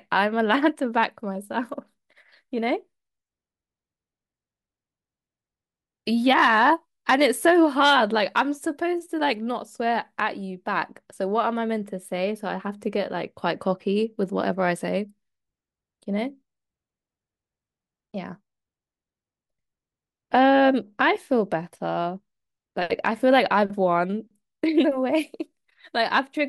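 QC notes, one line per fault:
No faults heard anywhere in the recording.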